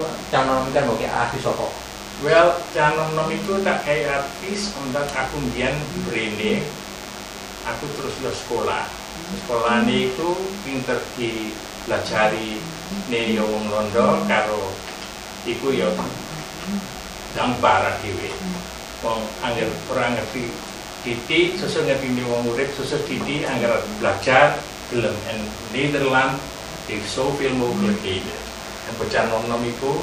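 A thin, steady buzz at 100 Hz with a dense stack of harmonics runs under the whole clip, roughly 15 dB below the main signal. This is DECT cordless phone buzz: a nearby handset or base pulses its radio every 10 ms, and the audio circuitry rectifies those bursts.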